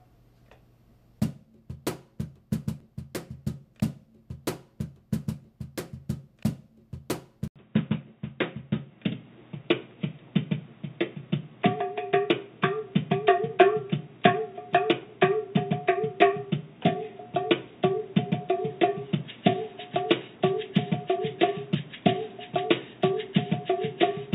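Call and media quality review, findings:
Input switched to a poorer device, 7.48 s to end. Brief dropout of 80 ms at the switch, then band-limited, boxier sound with nothing above 3.8 kHz, a modest level shift and a different, low-level noise floor. Likely cause: capture path moved to a narrower-band microphone or headset call profile.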